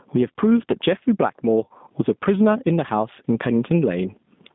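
Speech, with two faults running throughout. The level pumps by around 20 dB, squashing the dynamics, likely from input gain set far too high with a fast limiter clamping it. The G.729 codec damage is plainly audible: the band sits between 150 Hz and 3.6 kHz, and the rough, synthetic texture fits an 8 kbit/s G.729A stream behind the call's microphone processing.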